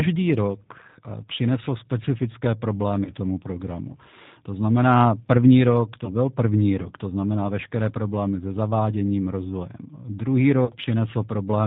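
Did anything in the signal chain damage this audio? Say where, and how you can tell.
Yes. At the codec stage, the whole clip carries the sound of the G.729 codec. This speech has a slightly rough, synthetic texture and nothing above 4 kHz, which fits an 8 kbit/s coder that rebuilds each 10 ms frame from a vocal tract filter, a pitch predictor and a handful of pulses. On a spectrogram the energy stops at a hard ceiling at 4 kHz, and harmonics look smeared and grainy rather than clean.

At the network stage, VoIP packet loss concealed by the speech codec disturbs the speech from 3.05 to 3.13 s, between "přinesl specifické" and "tomu programu". About 20 ms of audio went missing, which points to a single lost packet. The decoder filled the gap by extending its last pitch and filter, so a short buzzy tone or coloured noise that fades replaces the speech, and the voice sounds weak or distorted for a while afterwards. 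On the waveform the envelope sags there, and the spectrogram shows flattened, repeated harmonics.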